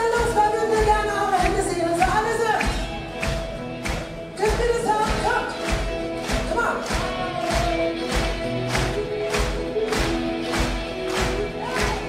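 From about 4.53 s to the end there's crude rate conversion: samples were linearly interpolated with no proper filter, which fits a 44.1 kHz to 48 kHz change. That leaves a gritty, inharmonic fizz roughly 35 dB down, riding on the louder, brighter sound.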